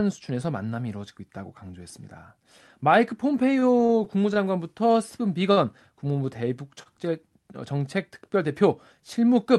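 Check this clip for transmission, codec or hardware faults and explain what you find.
Three network stalls turn up in this speech clip, all concealed by the receiver rather than lost: a stutter and two short single-packet stalls.

Repeated stalls (stutter), 3.59 to 4.39 s. Packets reached the receiver late or slower than playback consumed them, so the jitter buffer emptied four times in under a second. Each time the receiver extended the last stretch of sound until data arrived. About 82 ms was filled this way, roughly a tenth of the span, with the longest gap 30 ms. Nothing is lost, but the speech catches and drags in small hitches.

Short stall from a late packet, at 5.52 to 5.60 s and again at 6.83 to 6.89 s. In each case a single packet missed its playout time, the buffer ran dry, and the receiver held the preceding sound until it arrived, then resumed from the same point. The first hold lasts 50 ms, the second 29 ms, matching the jump in delay each time. 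The listener hears a sound briefly drawn out, with a faint buzz or dip. The Opus call path, whose top end stops near 12 kHz, plays no part in these faults.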